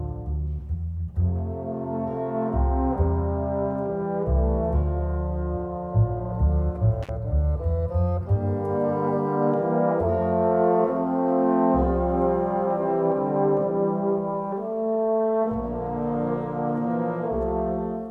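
At 7.03 to 7.09 s there's an intermittent contact: a loose plug or cable briefly opens, so the sound drops out for about 41 ms, with crackle at each edge and faint hiss in the gap.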